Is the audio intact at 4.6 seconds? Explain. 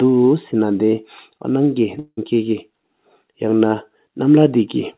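Yes, the audio is intact at 4.6 seconds, with no fault at that moment beyond the narrowband call-codec sound, which leaves nothing above 4 kHz.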